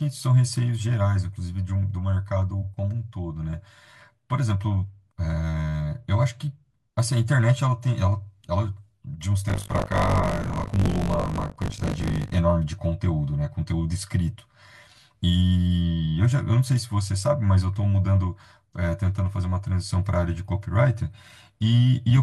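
AAC frame loss with concealment occurs at 2.61 to 2.66 s, a gap of about 43 ms, which fits a single lost frame. The decoder had nothing to play for that stretch and rebuilt it from the last good spectrum, re-using its energy with randomised phase. The speech briefly turns smeared and noisy, a short phasey blur rather than a dropout, because the gap is too brief for the concealment to fade toward silence.

Buffer tearing runs from 9.48 to 12.35 s. The writer and the hardware reader of the playback ring buffer have slipped out of step, so each period contains a slice, around a fifth of it, taken from audio roughly 40 ms older, spliced in with hard joins at both edges. Those repeated discontinuities produce a steady robotic rattle at 50 Hz, which fits a 20 ms buffer period. The buzz rides on the speech and drops away in pauses.

AAC frame loss with concealment returns at 16.05 s, again consistent with one missing frame. 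The same spectral fill-in papers over it and leaves a brief noisy, phasey smear on the speech.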